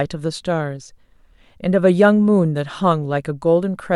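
No faults detected in the speech; nothing to flag.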